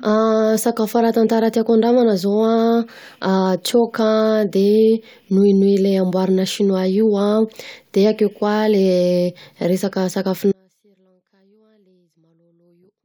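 An audio dropout to a faint residue begins at 10.52 s and runs to the end of the clip. The speech cuts off abruptly, with no fade, leaving only faint sound roughly 40 dB below the normal signal level. The likely cause is a break in the wanted signal path while everything downstream stayed live, so the gap still carries a trace of sound rather than true silence.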